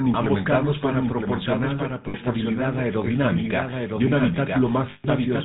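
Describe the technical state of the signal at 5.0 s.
At 5.0 s the sound has collapsed into a rough, metallic ring that holds in place rather than moving on, running from 4.90 to 5.06 s. These are lost GSM frames. When the decoder gets bad frames, it keeps reusing the parameters of the last good one at falling level, so a short stretch of sound is frozen and buzzes. The gap lasts about 140 ms, which fits roughly seven missing 20 ms frames.

Underneath, the whole signal has the gravelly, buzzy roughness of the GSM full-rate codec, with nothing above 4 kHz. The damage is plainly audible. The codec models the vocal tract and excites it with regularly spaced pulses, keeping only every third excitation sample. That thin, coarse texture points to the 13 kbps full-rate coder.

A doubled audio track is also present at this moment. A clean, full-band copy of the same speech trails about a second behind, a few dB quieter than the original, with no decay or room colour of its own. 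The likely cause is the audio being captured a second time through a slower path, so that the two copies sit out of step in the mix.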